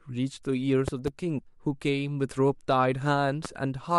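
A speech recording with loud pops. Two sharp pops fall between 0.88 and 1.10 s, and a single pop at 3.45 to 3.47 s. Each peaks about 10 dB above the speech, which continues underneath. The likely cause is a sudden voltage pulse, from a plug, switch, static or driver glitch.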